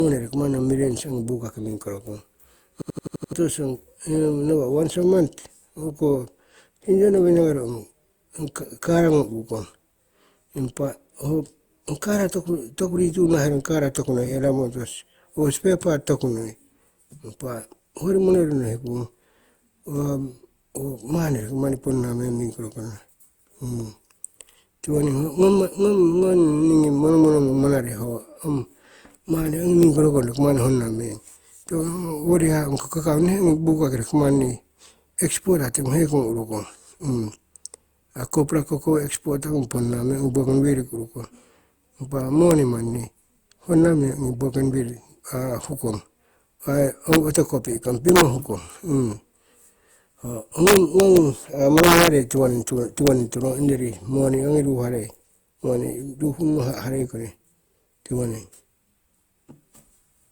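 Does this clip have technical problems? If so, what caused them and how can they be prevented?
Yes. Throughout, the speech sounds swirly, hollow and smeared, with blurred onsets. This is likely generation loss from Opus at 64 kbit/s re-encoded several times. A spectrogram shows nothing above 20.2 kHz. To prevent it, keep a lossless master and encode to Opus only once, at the final step.

From 2.82 to 3.33 s a system hang loop repeats one 85.33 ms slice six times, an 11.7 Hz stutter that fits a 4096-sample buffer. About half a second of audio is lost, and the waveform shows identical repeating blocks. To prevent it, make the audio driver mute or stop its ring buffer when the host stalls.

Integer overflow produces violent cracks at 29.83, 42.51, 47.13 to 47.35, 48.09 to 48.21, 50.67 to 51.17, 51.78 to 52.08 and 53.07 s, where peaks pushed about 0 to 2 dB over full scale. The waveform shows peaks flipping abruptly to the opposite extreme. 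To prevent it, use saturating arithmetic or floating point with a limiter before conversion to integer.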